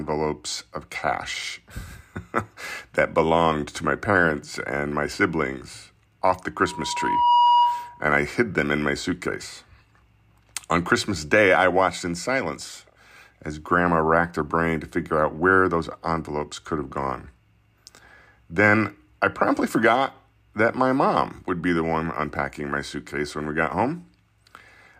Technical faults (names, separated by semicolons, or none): loudspeaker feedback squeal